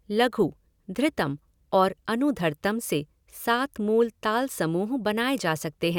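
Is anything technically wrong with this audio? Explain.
No, nothing technically wrong can be heard here.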